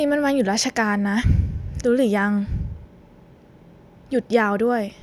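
Nothing in this recording stands out as a technical fault; the speech simply runs its course with nothing breaking in to interrupt it.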